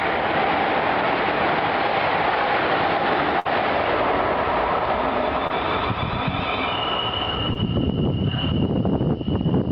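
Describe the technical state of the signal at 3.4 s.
A burst of packet loss runs from 3.39 to 3.47 s: about 57 ms is filled by repeating and fading the preceding sound, and the audio then resumes with 60 ms skipped.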